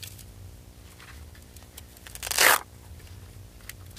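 From the first moment to the last there's a video or display buzz sitting under the sound. Some screen or video cable is coupling into the audio line, so you get a low buzz locked to the picture's field rate of 59.94 Hz, with raspy hash stacked above it, plus a thin whine at the 15.7 kHz line rate. It runs roughly 20 dB below the wanted signal.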